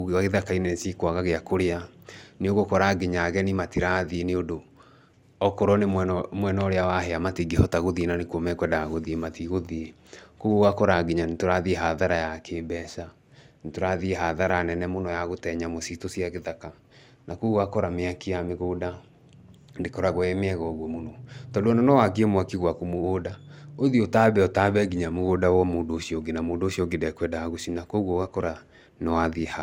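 Speech, with generation loss throughout: the sound is swirly and hollow, consonant attacks are smeared, and nothing is present above 16.6 kHz. The likely cause is repeated lossy re-encoding, roughly five passes, which fits an MP2 chain at 128 kbit/s.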